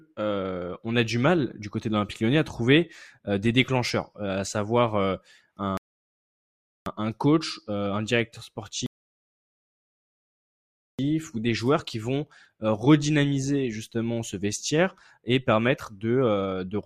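At 5.77 s the speech halts in a rebuffering stall: the player has run out of downloaded audio and waits, so silence holds until 6.86 s, adding about 1.09 s. A second stall runs from 8.86 s to 10.99 s, adding about 2.12 s. Each time, playback resumes exactly where it stopped, with nothing missing. On a waveform each gap is a flat line; a spectrogram shows a clean vertical blank band with no smearing at either edge.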